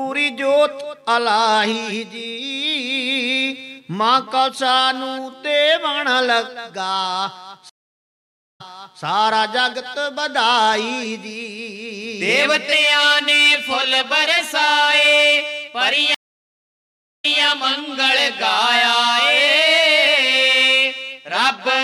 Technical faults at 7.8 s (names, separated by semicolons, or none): stream reconnect